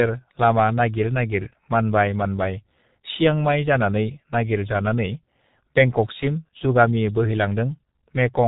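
From start to finish the speech has that G.723.1 codec character: nothing above 4 kHz, so it's dull and muffled, and the slow, coarse voice model leaves it hoarse with smeared consonants. The damage is heavy, which fits a bitrate around 6 kbit/s.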